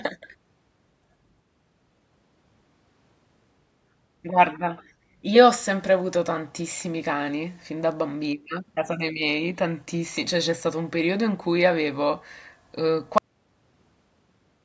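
At 13.18 s the speech stops abruptly with a cut-off end. The final buffers were never written, so the sound breaks off mid-sound. There is no natural decay. Digital silence follows until the end, about 1.5 s later.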